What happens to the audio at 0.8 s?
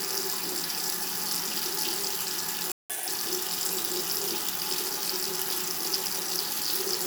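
Nothing goes wrong at 0.8 s; the audio plays through that moment intact, with no dropout, click or other fault.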